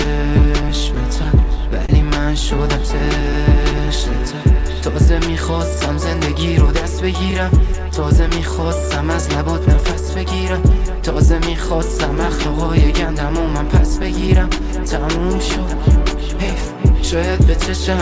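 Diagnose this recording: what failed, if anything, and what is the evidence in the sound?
Clock drift between sender and receiver sits at the network and buffer stage. The sender's clock runs about 3% slow, so the jitter buffer keeps draining. Small timing hiccups recur unevenly across the whole recording, beneath the 8 kHz ceiling of the G.722 call path.

Scattered short gaps appear between 0.04 and 1.92 s. About seven packets arrived late or went missing. The receiver bridged each hole by extending the previous sound. Each patch is brief, the longest about 30 ms, heard as small ticks or smears.

Repeated timing corrections run from 0.62 to 17.58 s. To keep up with the slow sender, the receiver stretches the audio, adding roughly half a second overall. That is a 97% playback speed. The edits all go the same way but are unevenly spaced, giving a faintly unsteady tempo.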